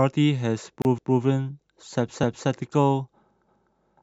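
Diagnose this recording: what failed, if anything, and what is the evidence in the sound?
A gap at a join of encoded pieces, at the codec stage, opens at 0.82 s and lasts about 31 ms until 0.85 s. The speech then resumes exactly where it stopped. Unlike a network dropout, nothing is missing. The silence is encoder start-up delay and last-frame padding left in when the separately encoded pieces were joined.

Overlapping chunks, at the buffer stage, cause a stutter from 0.98 s to 1.23 s, where 250 ms of speech plays twice. This fits chunks about 1 second long, each starting before the previous one finished. Unlike a splice gap, no silence is inserted and material is duplicated rather than paused.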